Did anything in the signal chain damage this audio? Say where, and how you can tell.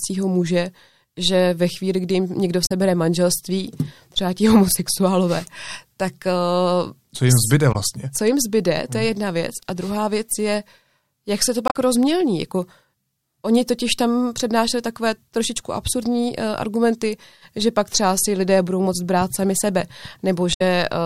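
Yes: damaged data in a compressed stream, at 2.65–2.72, 7.72–7.76, 11.65–11.75 and 20.53–20.61 s, each a short chirp, squawk, click or hole in the speech. At the codec stage, corrupted bytes made the decoder misread frames, lose sync and hunt for the next header.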